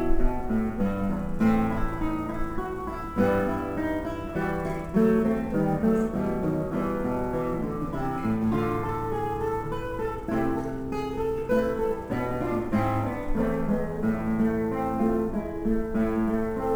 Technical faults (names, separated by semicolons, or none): sample clock jitter